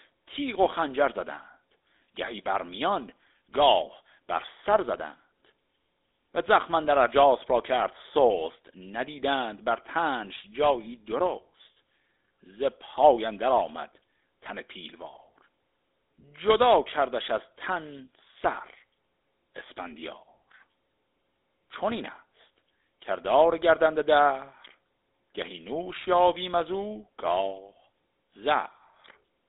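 The speech has passed through the GSM full-rate codec for its whole length. The encoder rebuilds the signal from a vocal-tract model driven by a sparse, regularly spaced pulse train, and the result fits the 13 kbps full-rate mode. The line carries only about 300 Hz to 3.7 kHz, so the low body and upper air are gone. The coding damage is plainly audible as a buzzy, gravelly roughness.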